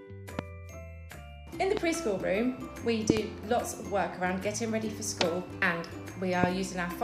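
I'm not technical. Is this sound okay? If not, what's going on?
No. There are loud pops at 0.39 to 0.41 s, 1.77 to 1.79 s and 6.44 to 6.46 s, plus a quick double pop between 3.10 and 3.19 s that is the strongest of them. Each is a sharp burst far louder than the surrounding sound, which carries on underneath. The likely cause is a sudden electrical jolt, such as a plug, switch, static or a glitch in the playback hardware, briefly adding its own kick on top of the signal.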